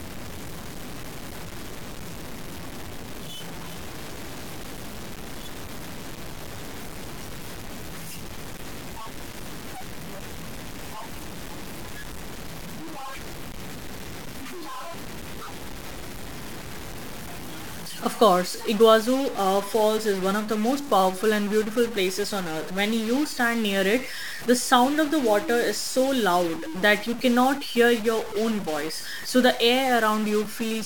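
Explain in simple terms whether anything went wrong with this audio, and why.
A stuck bit runs through the whole recording, from start to finish. The speech sounds harsh and buzzy, and even the pauses carry a steady hiss. This is likely a single line in the digital path frozen at one value, so about half of all the sound samples come out slightly wrong. The stuck bit is a fairly significant one, so the error is large enough to hear clearly, and it turns the quiet gaps between phrases into noise.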